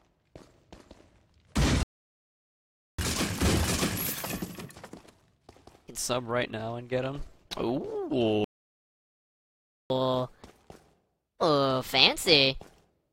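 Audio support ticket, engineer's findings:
Playback stall at 1.83–2.99 s (about 1.16 s) and 8.44–9.90 s (about 1.46 s): audio just cuts out mid-flow, then resumes. Likely the player starving for data or its audio thread getting blocked, so the output sits silent until the buffer refills.

Catch-up at higher speed right after each stall, 2.99–5.99 s and 9.90–12.90 s: 1.25x speed, pitch up around four semitones, both holding for 3 s. The player resamples its backlog faster to recover some of the lost time.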